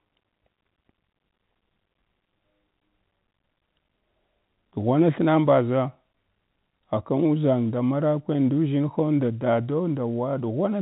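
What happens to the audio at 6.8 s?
Nothing goes wrong at 6.8 s: the speech passes intact, with only the narrow telephone band of G.711 coding that cuts off everything above about 3.8 kHz.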